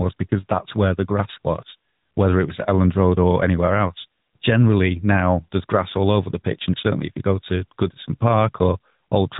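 Throughout, the speech has passed through the AMR narrowband mobile codec, at a rate that sounds like about 10.2 kbps, rebuilding the voice from a coarse vocal-tract model. Everything above 3.8 kHz is gone, leaving it muffled and telephone-like, with a plainly audible buzzy, synthetic edge.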